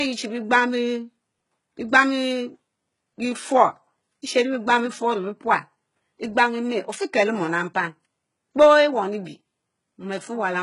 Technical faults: HE-AAC compression

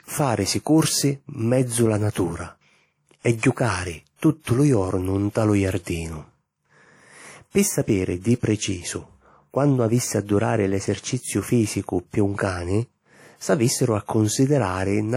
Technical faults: WMA compression; pre-echo

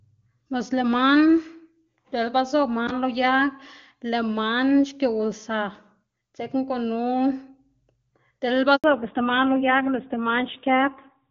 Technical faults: handover gap; fallback to narrowband

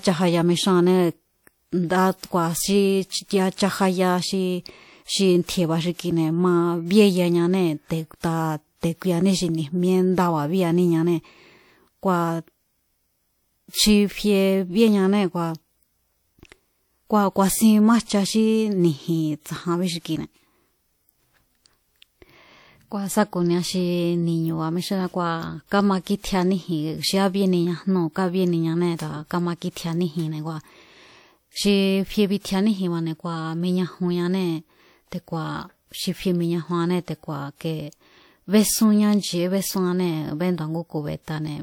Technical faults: pre-echo

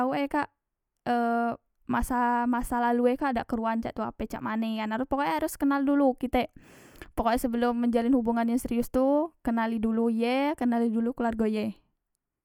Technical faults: none

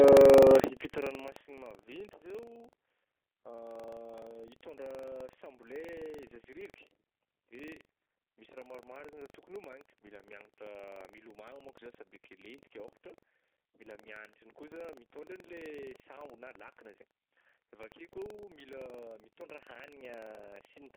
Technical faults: G.729 codec; buffer tearing; zipper noise

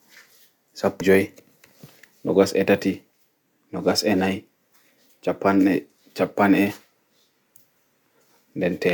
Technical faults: compressed frames skipped

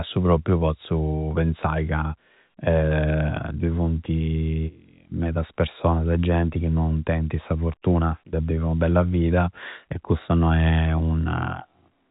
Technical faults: none

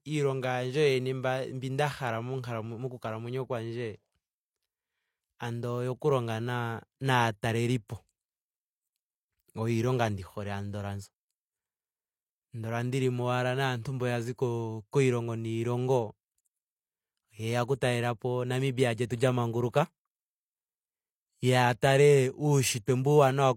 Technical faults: pre-echo

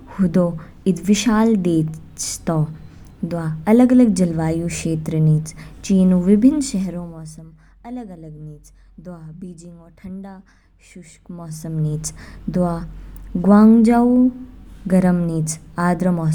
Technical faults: none

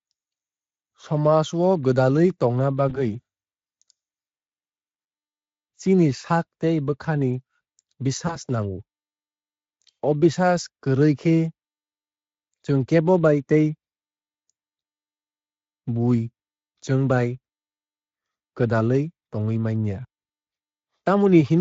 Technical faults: VoIP packet loss concealed by the speech codec

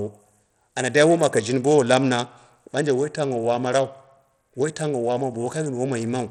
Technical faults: Bluetooth SBC compression

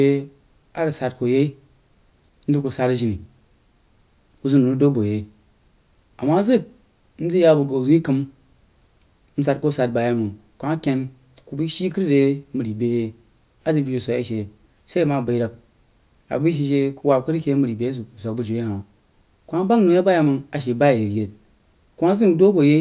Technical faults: none

